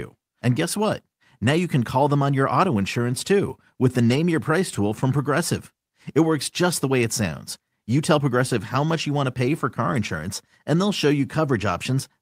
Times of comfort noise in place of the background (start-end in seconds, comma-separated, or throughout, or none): none